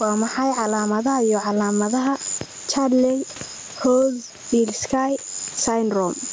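Throughout the speech, the input gain is likely set far too high, so a fast limiter clamps down on each loud sound. This gain pumping swings the gain by about 15 dB, squashing the speech.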